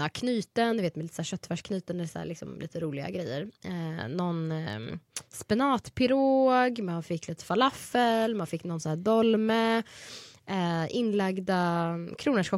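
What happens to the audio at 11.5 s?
Nothing goes wrong at 11.5 s; the audio plays through that moment intact.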